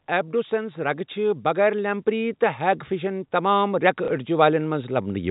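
A speech clip whose level creeps steadily upward from about 0.3 s almost to the end at 5.26 s, ending roughly 11 dB louder, with the background swelling right along with the voice. That joint rise is the signature of automatic gain rising: the gain control judged the input too quiet and kept turning up its gain over several seconds, so everything in the signal, not just the talker, gets louder. The telephone-band G.711 A-law coding is audible as a top end stopping at 4 kHz. Between 4.05 and 4.08 s there is a small blip, where a short slice of sound plays twice. This is packet loss with the last packet repeated: one chunk of audio went missing, which fits a single lost packet of about 30 ms, and the receiver filled the gap by replaying the previous packet.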